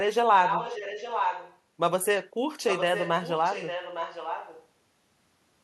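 Speech clip with echo leak from 0.44 to 1.59 s and 2.68 to 4.67 s: a copy delayed 0.86 s, about 5 then 10 dB down, likely from incomplete loudspeaker echo cancellation.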